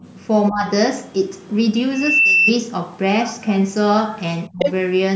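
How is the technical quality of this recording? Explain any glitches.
The recording has three kinds of call-path fault: double-talk suppression, far-end leakage and a feedback squeal. The speech passes through typical call microphone processing with no content above 8 kHz.

Speech suppressed in double talk occurs at 0.50 to 0.66 s and 4.49 to 4.59 s. The talker's level dips by about 15 dB and then about 25 dB. This is likely the echo canceller failing to separate near speech from loudspeaker echo and attenuating both.

The other side's voice leaking through is heard at 1.39 to 1.53 s, very faint (around 40 dB below the talker), and at 4.59 to 4.72 s, roughly as loud as the talker. This is likely residual loudspeaker echo the canceller did not remove.

A loudspeaker feedback squeal runs from 1.92 to 2.54 s. A single 2.7 kHz tone swells over about 0.3 s to about 5 dB above the speech. The microphone is picking up its own loudspeaker, and at that frequency the loop gain exceeds one.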